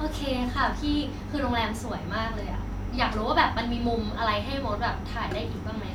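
No technical faults can be heard anywhere in this speech recording. Nothing in it calls for comment at any point.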